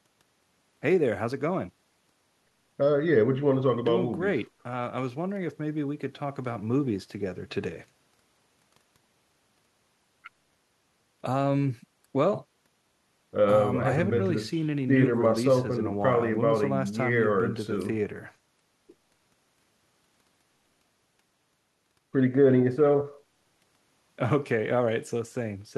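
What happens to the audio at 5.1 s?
At 5.1 s the speech carries on cleanly, with no dropout, click, distortion or other break in the signal.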